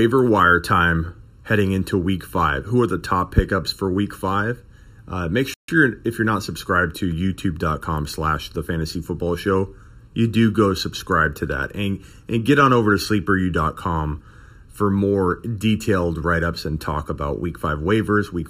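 Channel delay (comb filtering) runs through the whole speech clip: one channel trails the other by under a millisecond, and summing them to mono cancels shared content at evenly spaced frequencies, starting around 700 Hz, leaving the voice hollow and phasey throughout.

A playback stall at 5.54 s to 5.68 s cuts the sound to silence for about 146 ms mid-flow before it resumes. The likely cause is the player running short of data or its thread being blocked until output could recover.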